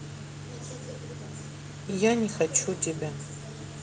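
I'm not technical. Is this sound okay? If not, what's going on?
Yes, this speech recording is in good technical shape, with nothing going wrong in the signal at any point.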